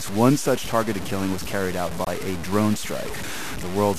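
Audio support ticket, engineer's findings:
Grainy distortion throughout, riding on the speech and vanishing in pauses, unlike steady hiss. Likely low bit depth without dither: truncation to about 5 bits, error roughly 10 dB below signal.

Abrupt silence 2.05–2.08 s, between "killing was carried out" and "a drone". Corrupt frame muted: decoder rejected a damaged frame. The 32 ms gap fits one frame; timing is kept, with no skip or concealment smear.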